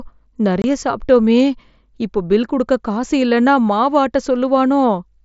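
From 0.62 to 0.64 s, unconcealed Bluetooth headset packet loss cuts a hole of 22.5 ms into the speech. Packets between headset and phone never arrived, and silence or an idle pattern replaced them. The gap has abrupt edges. Its length suggests three lost packets.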